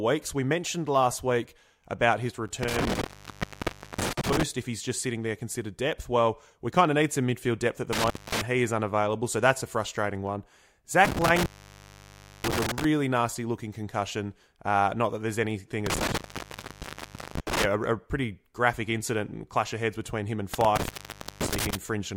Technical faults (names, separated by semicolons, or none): intermittent contact